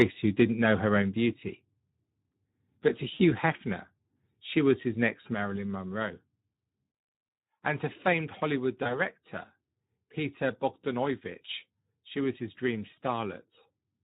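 Speex codec damage runs through this speech clip. The starved CELP excitation leaves the voice plainly hoarse and noisy, which fits a rate near 11 kbps. Microphone overload at 0.00–0.02 s clips the opening peak by about 6 dB, flattening its tops into a harsh crackle, likely because the input gain was set too high. Microphone volume stepped down follows at 0.02 s (about 2 dB), 1.02 s (about 4 dB), 5.34 s after "she was his next" (about 4 dB) and 8.55 s after "to famed" (about 2 dB). Each is a sudden drop in voice and background together, likely as the call software cut the device's input level. VoIP packet loss concealed by the speech codec appears at 3.13–3.23 s (60 ms lost), 8.83–8.99 s (20 ms lost) and 12.95–12.99 s after "she was his dream" (20 ms lost). In each, the decoder stretches the last pitch and filter into a fading buzzy tone or coloured noise, and the voice stays weak until the decoder recovers.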